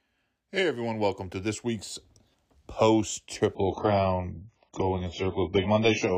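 At 3.55 s the speech abruptly drops to an adaptive stream at a lower bitrate, with no gap. Nothing sounds above 7.5 kHz and codec artefacts rise, fitting a very low-bitrate AAC version.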